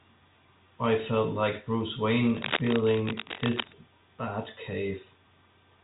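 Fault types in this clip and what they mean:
Cable scratch noise: dense, uneven scratching from 2.25 to 3.73 s, nearly as loud as the speech, likely a worn cable or connector being moved.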